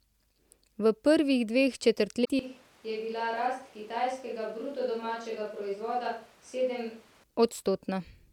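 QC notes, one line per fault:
2.21–2.29 s, damaged data in a compressed stream: a short glitch of about 80 ms. Corrupted bytes in the stream made the decoder misread frames, lose sync and skip ahead to the next valid frame header. Unlike a dropout, which leaves silence or a smooth gap, this produces a garbled disruption where the decoder lost its place.
2.39–7.24 s, switch to a distant microphone: the speech turns abruptly roomy and hollow, loses low end, drops by roughly 10 dB, and a background noise floor appears at about 25 dB below the speech. At 7.24 s it snaps back just as abruptly. The likely cause is the close microphone's signal failing so the recording falls back on a farther pickup. Unlike a plain gain drop or EQ fault, the reverberant room tone arrives with the change.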